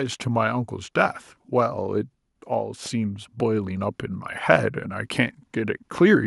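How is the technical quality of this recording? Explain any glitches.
I hear no glitches or faults.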